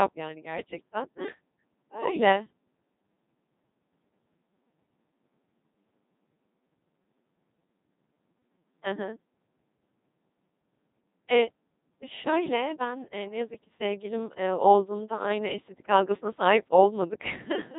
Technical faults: Codec 2 vocoder

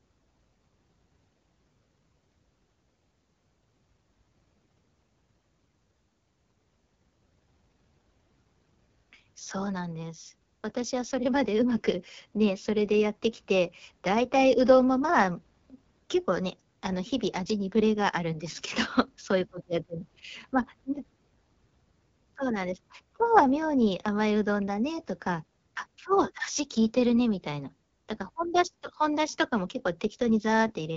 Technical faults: AMR wideband (HD Voice) codec

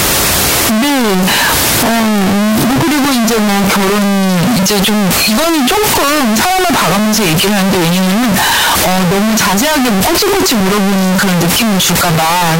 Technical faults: signed and unsigned mixed up

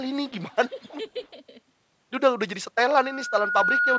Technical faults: echo leak; speech suppressed in double talk

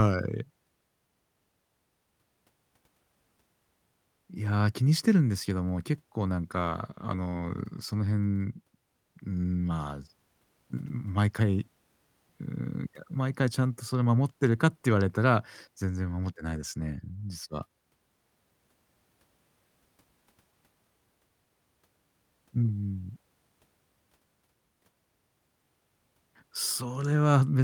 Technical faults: call bitrate drop

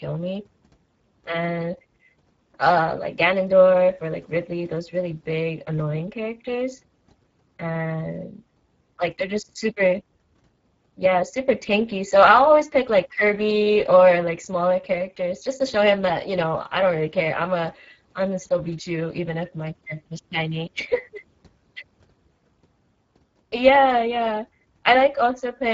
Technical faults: Speex codec

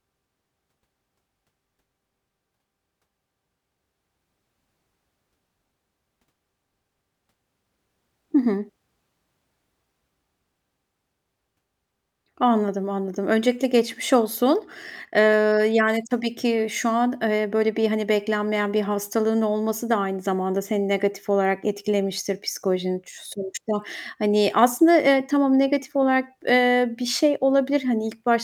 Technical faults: none

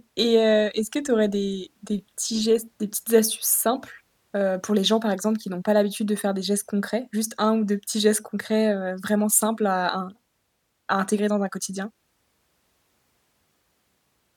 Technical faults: none

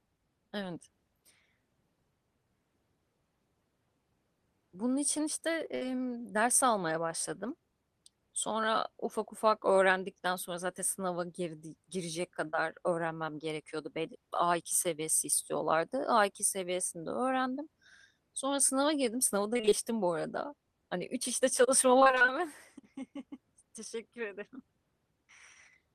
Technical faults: burst of packet loss; short concealed packet loss; repeated packet loss (robotic sound)

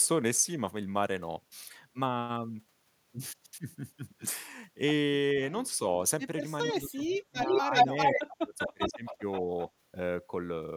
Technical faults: speech suppressed in double talk; echo leak

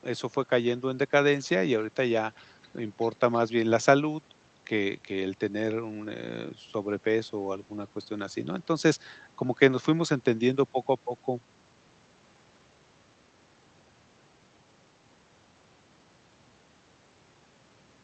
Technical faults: none

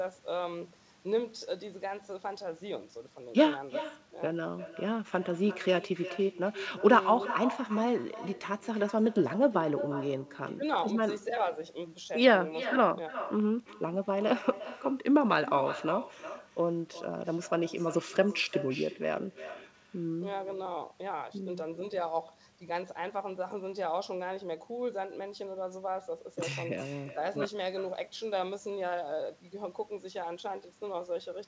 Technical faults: echo with no canceller

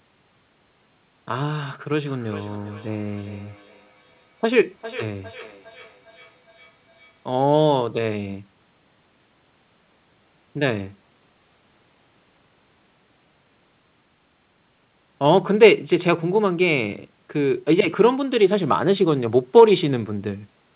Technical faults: feedback echo between two devices

